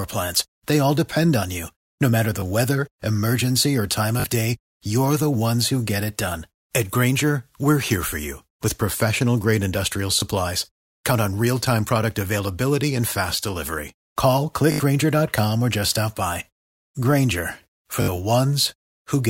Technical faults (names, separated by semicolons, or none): repeated buffer